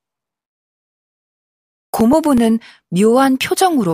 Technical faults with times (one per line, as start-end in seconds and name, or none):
1.63-2.62 CD scratch ticks